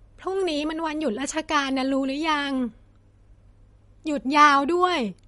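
MP3 compression, throughout the clip: the speech has nothing above 11.2 kHz, and the damage is plainly audible, with a watery, swirling texture and metallic chirps on s sounds. This is likely the work of an MP3 encoder starved of bits, which fits a rate near 48 kbps. It sheds the treble at a fixed cut-off and zeroes faint frequency lines that flicker on and off between frames, smearing consonant attacks.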